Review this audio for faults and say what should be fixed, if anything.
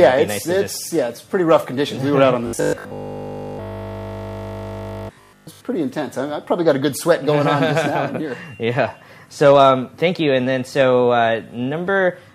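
From 2.47 to 5.61 s the sound turns into a rigid, metallic 50 Hz buzz, which is robotic sound from repeated short buffers. The likely cause is audio arriving too seldom, so the last 20 ms is replayed almost continuously in place of skipped material. A spectrogram shows evenly spaced harmonic lines at multiples of 50 Hz, and the waveform shows one identical short block repeating. Keeping the input fed steadily, with a larger buffer or a higher-priority audio thread, would prevent these underruns.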